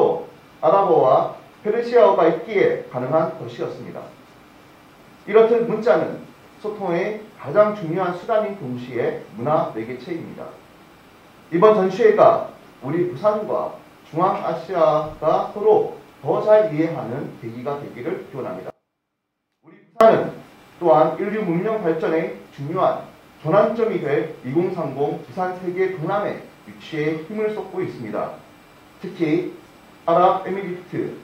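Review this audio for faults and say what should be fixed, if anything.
At 18.7 s the sound drops out abruptly and stays gone until about 20.01 s, roughly 1.3 s. Only a faint trace around 30 dB down remains, so this is an audio dropout to a faint residue, likely a brief signal loss upstream while the path itself stayed live. To prevent it, secure cables and connectors and watch the input meters while recording.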